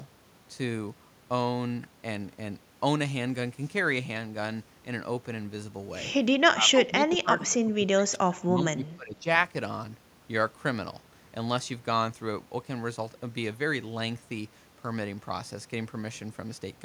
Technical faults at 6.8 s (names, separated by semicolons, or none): speech suppressed in double talk